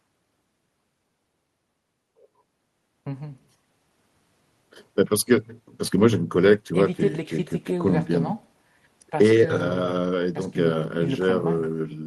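A speech recording, and nothing in it is technically wrong.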